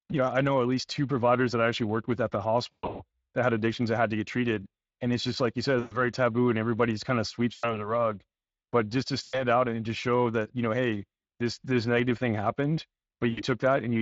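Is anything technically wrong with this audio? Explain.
Yes, there are two problems: Speex codec damage across the whole clip, and five bursts of VoIP packet loss concealed by the speech codec.

The Speex codec coloration runs from start to finish and is plainly audible. The speech has the grainy, hoarse texture of a CELP coder that is short of bits for the excitation signal. The codec models the vocal tract with a filter and approximates the excitation from a codebook, so fine detail is lost. The degree of damage points to a mid-rate setting of roughly 20 kbps.

VoIP packet loss concealed by the speech codec occurs at 2.72–3.02 s, 5.79–5.99 s, 7.53–7.92 s, 9.23–9.43 s and 13.31–13.43 s. The first event is the worst: about 220 ms of audio is missing, scattered over 280 ms, with the longest gap 120 ms. The others lose 120, 100, 100 and 60 ms. During each gap the decoder keeps repeating its last pitch and filter while lowering the gain. 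The speech smears into a buzzy tone or a coloured noise that fades, and it stays weak for a moment after packets resume.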